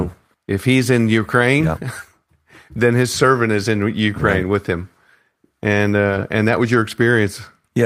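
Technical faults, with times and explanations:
6.09–6.23 s: lost packet rebuilt from error correction. About 80 ms of speech in this stretch is played from reduced-quality backup copies instead of the original packets, which fits four separate 20 ms packets being lost. Each following packet carried a low-bitrate duplicate of the missing one (Opus in-band FEC), so the decoder filled the hole with no silence or dropout, but the replacement frames sound coarser and noisier than the surrounding audio.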